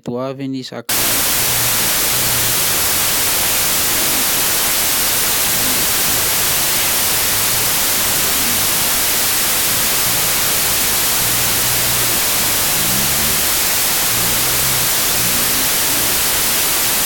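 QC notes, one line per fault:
0.89–17.05 s, wrong sample width: loud noise buries speech at half speed, an octave low, which fits 32-bit samples read as 16-bit. A plain rate error leaves no noise.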